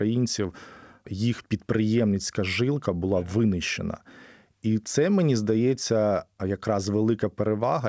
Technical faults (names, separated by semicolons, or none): none